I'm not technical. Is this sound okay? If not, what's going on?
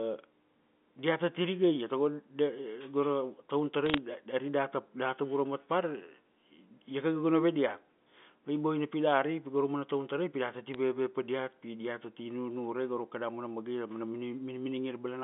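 No. There are bit errors on a digital phone line: a few of the ones and zeros carrying the call got flipped, and each flipped bit knocks one tiny slice of the sound out of place. You hear this as brief crackly ticks from 3.86 to 3.98 s, then more ticks at 10.74 s, right after "tarai pi data ti". Unlike a dropout, nothing goes missing or silent. The speech carries on unchanged underneath the ticks.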